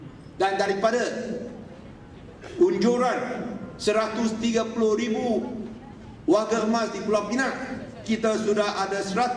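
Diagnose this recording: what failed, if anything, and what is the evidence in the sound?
Nothing in the signal path points to a failure: the audio shows no audible dropout, distortion, timing disturbance or other defect at any point.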